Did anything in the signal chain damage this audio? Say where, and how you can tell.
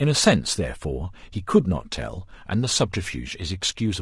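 Yes, at the codec stage, and the damage runs through the whole speech clip. The voice sounds rough and grainy, with noise filling the gaps between pitch harmonics. The likely cause is low-delay AAC compression of the AAC-ELD kind used for video calls. Its very short frames resolve harmonics poorly and spend bits inefficiently. The plainly audible degradation fits a bitrate of about 32 kbps.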